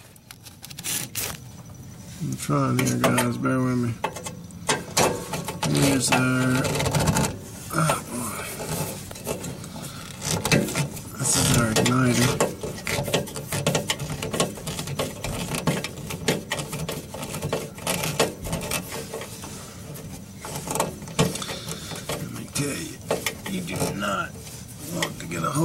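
Nothing technical goes wrong anywhere in this audio, so there's no fault to point to.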